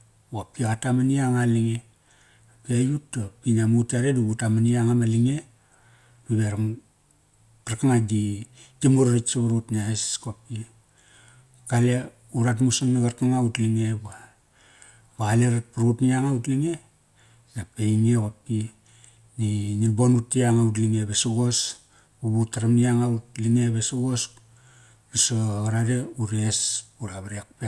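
No technical faults can be heard anywhere in the recording.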